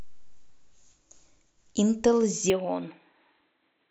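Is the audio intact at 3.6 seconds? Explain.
No. From 2.5 s to the end, the speech loses everything above 4.1 kHz and turns dull and boxy, with a faint new noise floor well below the signal and no gap or level jump. This is likely an input switched to a poorer device.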